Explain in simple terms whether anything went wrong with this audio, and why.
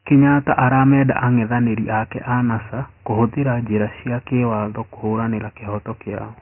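Something did go wrong, and it lasts the whole clip. This speech has been squeezed through Dialogic VOX ADPCM, the old format phone menus and voicemail systems use. It stores each moment of sound very roughly, so there's a gritty hiss riding along with the voice, and here that damage is heavy. It also throws away everything above about 2.9 kHz, which is why it sounds muffled and phone-like. That cutoff points to the slower, lower-quality version of the format.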